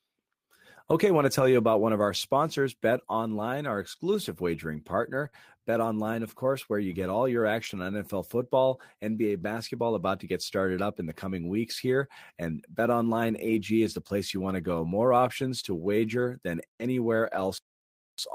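It's a speech clip on a call path that drops packets now and then, and most of the damage is lost packets rebuilt from error correction. At 1.35–1.41, 5.25–5.27, 7.62–7.72, 13.46–13.56, 15.00–15.02, 16.20–16.26 and 17.36–17.42 s there's no gap, just a short stretch of 20 to 60 ms that sounds grainier and noisier, which fits one to three lost 20 ms packets. The decoder is playing the low-bitrate backup copy carried in the following packet instead of the real frame. Right after the 5.25 s patch, at 5.29–5.34 s, there's a short concealed packet loss. About 20 ms never arrived in time, and the receiver carried the preceding sound forward for roughly 28 ms before blending back, so you hear a brief smear or wobble there instead of a clean hole.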